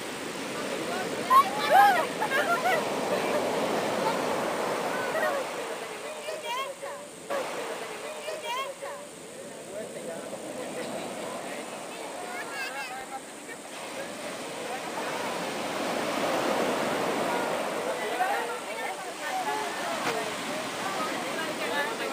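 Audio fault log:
7.29–9.29 s, stream segment repeated: the player fetched or queued the same segment of the stream a second time, so roughly 2.0 s of audio plays again immediately after itself. A small blip marks the jump back at 7.29 s, where the replay splices onto the earlier material.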